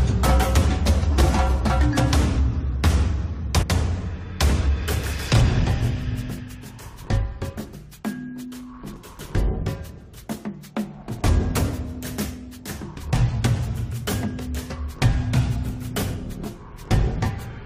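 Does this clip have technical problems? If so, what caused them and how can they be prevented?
Yes. Damaged data in a compressed stream at 3.61–3.64 s and 8.95–8.97 s: corrupted bytes make the decoder misread frames and lose sync, producing brief blips. Prevent this with checksummed, error-protected transport and storage.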